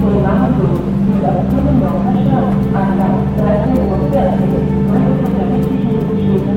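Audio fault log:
No faults detected; nothing in the signal path calls for attention.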